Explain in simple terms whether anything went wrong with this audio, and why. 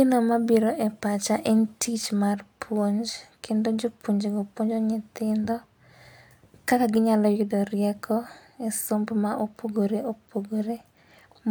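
Nothing went wrong here; no technical faults can be heard.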